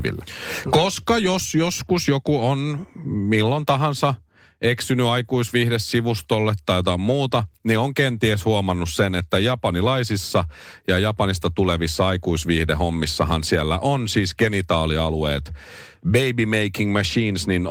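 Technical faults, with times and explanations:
No technical faults can be heard: the speech has passed through Opus voice compression, which sounds like its hybrid mode with the full audio band kept and only light coding effects, consistent with a rate of around 24 kbps.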